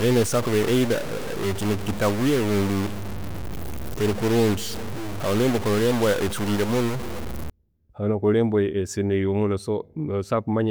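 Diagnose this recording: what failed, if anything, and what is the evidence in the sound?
From 0 to 7.5 s the speech picks up a harsh, buzzy grit, and even the pauses fill with noise. That points to a stuck bit, likely a broken data line or converter bit, shoving roughly half the samples off by a fixed step around -25 dBFS. It clears after 7.5 s.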